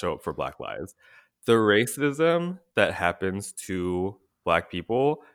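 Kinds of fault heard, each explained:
No technical faults are audible anywhere in the recording.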